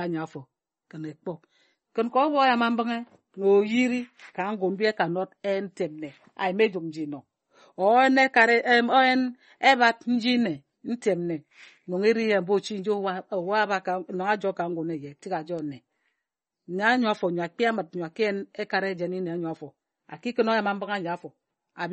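From start to finish the speech has nothing above 8.4 kHz and a plainly audible watery, swirly texture, with smeared consonants. That's most likely MP3 compression squeezed hard, consistent with a bitrate around 32 kbps, so the encoder dropped the top end and kept switching weak frequency detail on and off.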